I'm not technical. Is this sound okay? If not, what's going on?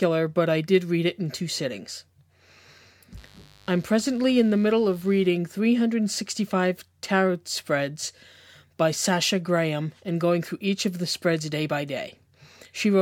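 No. From 3.17 to 5.27 seconds there is a mains buzz under the speech. It is a steady, raspy hum. Electrical interference from the 50 Hz power supply leaked into the recording. It sits quietly beneath the voice, then stops.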